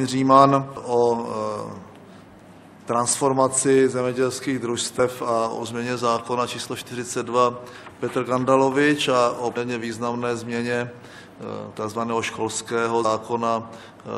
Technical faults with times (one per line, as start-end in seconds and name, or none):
0.76 damaged data in a compressed stream
2.43 damaged data in a compressed stream
4.98 damaged data in a compressed stream
9.56 damaged data in a compressed stream
13.04 damaged data in a compressed stream